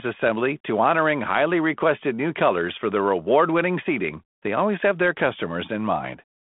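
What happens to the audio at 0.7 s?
At 0.7 s the speech comes through intact, carried over the G.726 ADPCM telephone line, with its band stopping at 3.8 kHz and nothing breaking into the sound at that moment.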